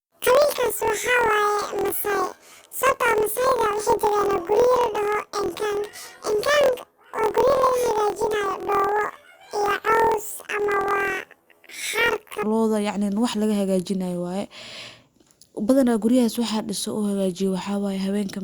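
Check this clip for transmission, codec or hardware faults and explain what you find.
One fault is present: planar audio read as interleaved, running from 0.0 to 12.45 s. Each 24 ms block stores all left-channel samples followed by all right-channel samples, but the player treats them as alternating left-right pairs. Each half-block therefore plays back at double speed, left then right, so the overall pace is preserved. The speech comes out an octave (12 semitones) high, with a rough flutter at the block rate of about 41.7 Hz.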